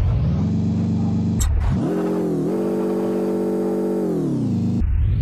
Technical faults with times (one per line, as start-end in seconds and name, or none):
2.30-5.21 sample clock jitter